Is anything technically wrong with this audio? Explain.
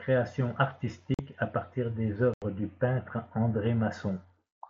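Yes. The speech, carried over an mSBC wideband headset link that keeps its usual 8 kHz top end, has two cases of unconcealed Bluetooth headset packet loss. The first runs from 1.14 to 1.19 s (about 45 ms) and the second from 2.34 to 2.42 s (about 82 ms). Each gap points to a run of several consecutive short voice packets between headset and phone failing to arrive. Nothing was concealed, so the missing audio became silence or an idle pattern and the speech cuts out abruptly, with hard edges on the holes.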